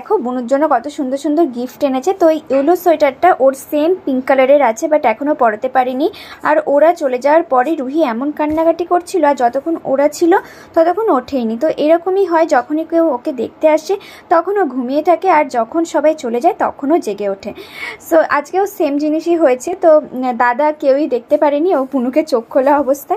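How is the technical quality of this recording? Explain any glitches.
There is one glitch, at 19.68 to 19.73 s: a brief 50 ms sag where the sound abruptly drops by about 6 dB and snaps back. The likely cause is one channel dropping out, so the mono sum loses half of the shared content.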